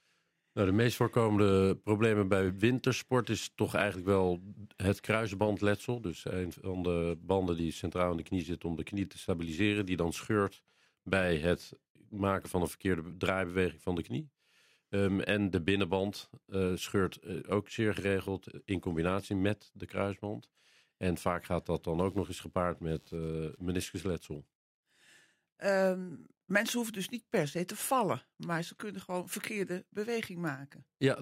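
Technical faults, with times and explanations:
21.99–23.99 s, computer activity noise: for about two seconds a buzzing, scratchy layer sits under the sound, pulsing at around 100 times a second and roughly 35 dB below the programme. It comes from the computer rather than the recording: a burst of processor, graphics or mouse activity draws current that disturbs the ground shared with the audio circuit, so the interference follows the machine's workload and stops when that load drops, regardless of what the sound is doing.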